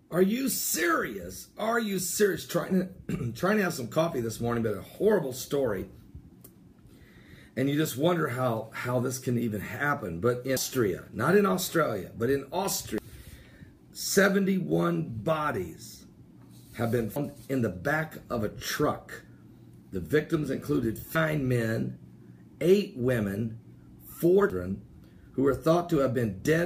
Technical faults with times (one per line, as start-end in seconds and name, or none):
10.57 damaged data in a compressed stream
12.98 damaged data in a compressed stream
17.16 damaged data in a compressed stream
21.16 damaged data in a compressed stream
24.50 damaged data in a compressed stream